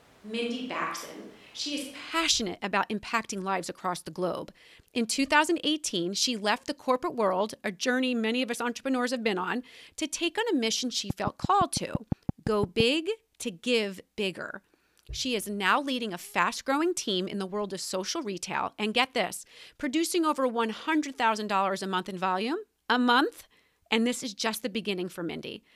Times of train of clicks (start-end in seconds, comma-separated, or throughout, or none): 11.10-12.81